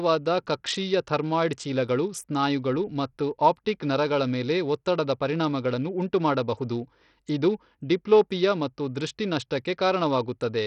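Throughout the speech, treble flickers and a gritty grain clings on, likely heavy Bluetooth SBC compression starving the upper sub-bands, consistent with roughly 64 kbps.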